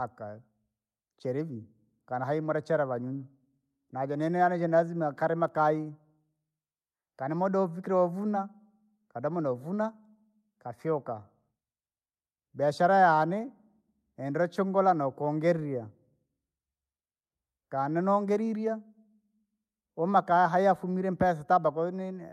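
Nothing technical goes wrong anywhere in this speech recording, so there's nothing to point to along the way.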